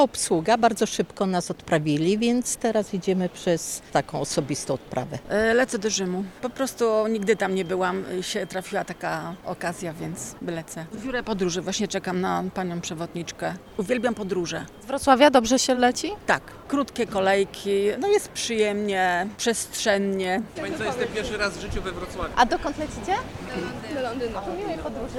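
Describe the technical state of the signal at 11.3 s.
At 11.3 s the signal is intact, with no dropout, distortion, or other fault audible at that moment.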